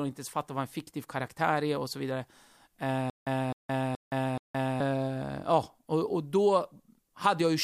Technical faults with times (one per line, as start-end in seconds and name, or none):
3.10-4.80 stutter with silent gaps